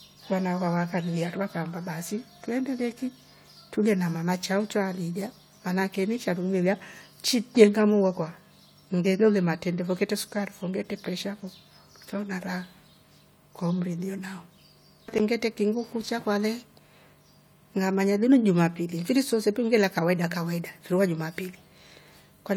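No technical faults can be heard anywhere in this speech recording. There is nothing to point to at any moment in the audio.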